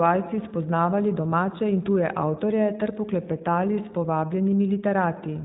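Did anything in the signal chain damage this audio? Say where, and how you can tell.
Yes. iLBC codec damage throughout, at the codec stage: nothing above 3.8 kHz, and audible roughness from coding each 20 ms frame independently, consistent with about 15 kbps.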